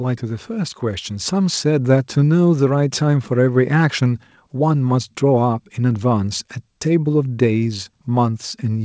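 From 0.47 to 2.07 s, automatic gain rising: the gain control judged the speech too quiet and raised its gain by about 6 dB, so voice and background swell together, over a path with nothing above 8 kHz, consistent with a G.722 call codec.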